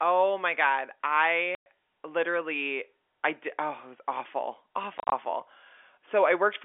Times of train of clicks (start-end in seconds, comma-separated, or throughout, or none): none